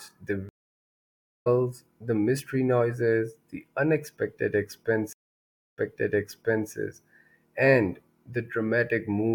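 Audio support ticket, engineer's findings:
Dropout 0.49–1.48 s, about 970 ms of silence, then resumes at "the mystery noises the" with roughly a second of material skipped. Stream reconnect: connection dropped, player rejoined live and restarted the decoder further along the stream.

Dropout 5.13–6.72 s after "mystery noises the unexpected", 640 ms of silence, then audio resumes 952 ms earlier, replaying material already heard. Stream reconnect: server resent a buffered burst on rejoin, fresh decoder restarted from before the break.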